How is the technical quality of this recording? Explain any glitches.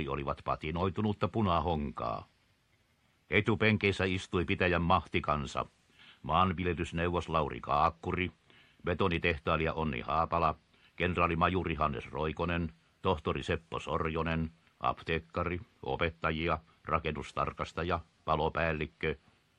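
Nothing glitchy turns up here, since the sound runs along without any dropouts, clicks or other hiccups to point to.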